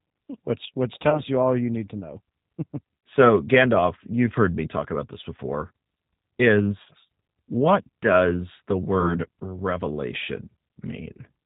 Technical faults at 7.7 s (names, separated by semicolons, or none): G.729 codec